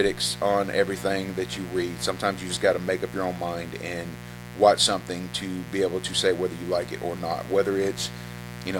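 From start to finish, the speech sits on a mains buzz tied to a 60 Hz supply, running fairly loud at around 15 dB below the speech itself. Sharp switching spikes, twice per mains cycle, have leaked into the signal path, so the hum carries a dense stack of harmonics and sounds like a steady, raspy buzz. A spectrogram shows evenly spaced horizontal lines climbing from 60 Hz into the kilohertz range, and the waveform shows a persistent spiky floor between phrases.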